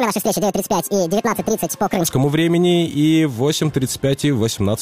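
From the start to 2.07 s, a section at the wrong speed plays back at 1.72 times normal rate, raising the pitch by roughly ten semitones and compressing its timing. The audio sounds high and hurried, likely from conversion against a mismatched clock.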